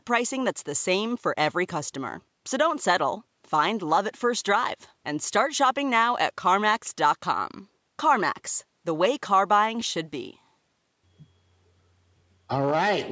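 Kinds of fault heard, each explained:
No technical faults can be heard in the speech, which has passed through a call's microphone processing that leaves nothing above 8 kHz and takes out the lowest bass in the normal way.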